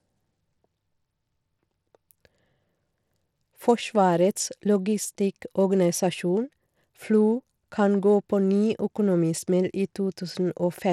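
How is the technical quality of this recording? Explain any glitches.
The recording has plainly audible codec damage from start to finish. Throughout the speech, the sound carries the marks of Bluetooth SBC compression, likely at a starved bit pool that fits roughly 96 kbps. SBC's eight coarse sub-bands leave the top bands short of bits, so the treble thins and flickers while a gritty grain and aliasing cling to the sound. Unlike MP3's swirling pre-echo or a clean low-pass, the damage here is a rough, buzzy texture.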